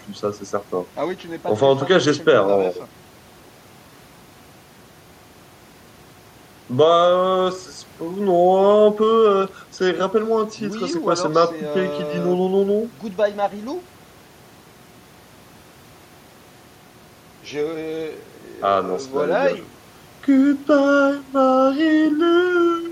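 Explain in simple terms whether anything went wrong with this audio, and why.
Nothing went wrong: the speech recording shows no technical faults anywhere.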